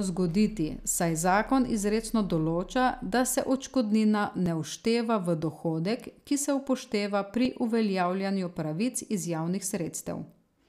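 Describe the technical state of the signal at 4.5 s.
At 4.46 s, right after "določa da se odškodnina", there is audio missing between chunks, likely from the recorder dropping a few milliseconds while closing one 3-second chunk and opening the next. The two sides butt together without silence, producing a brief skip in the speech.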